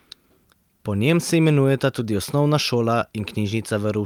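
A short speech recording with no technical fault to report. Nothing in the audio points to a problem in the recording or playback chain at any point.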